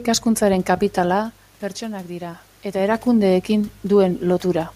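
Nothing stood out on listening to this speech recording; the room background and the level shifts near one second and again around two and a half seconds, where the talker seems to move relative to the microphone, belong to the recording itself.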